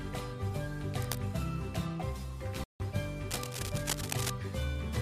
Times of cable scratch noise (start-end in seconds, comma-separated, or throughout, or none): 0.99-1.20, 3.28-4.30